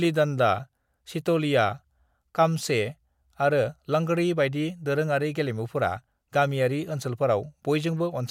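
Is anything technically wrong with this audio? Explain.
No, nothing technically wrong can be heard anywhere in this speech recording.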